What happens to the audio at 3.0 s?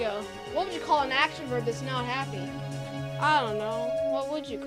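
At 3.0 s you're right in the middle of a loudspeaker feedback squeal that runs from about 2.36 s to 4.25 s. A mic is picking up the speaker it feeds, and at 650 Hz the loop gain tops one, so that tone keeps feeding itself. You hear it swell over roughly a second and a half into a steady howl that sits about 5 dB above the rest of the sound before it cuts out.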